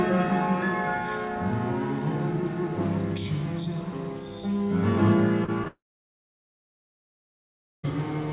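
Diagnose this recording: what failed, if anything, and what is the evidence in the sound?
Short concealed packet loss at the network stage, through a G.711 call path with nothing above 4 kHz: brief smears at 5.44 to 5.50 s (about 40 ms) and 5.64 to 5.68 s (about 20 ms). The decoder extended the previous sound, then blended back, leaving no hard gap or click.

A long network dropout runs from 5.68 to 7.85 s, likely lost packet delivery. Concealment stretches the last sound into a fading buzz or hiss, then about 2.1 s of silence. Unlike a muted input, the audio resumes later with that stretch missing.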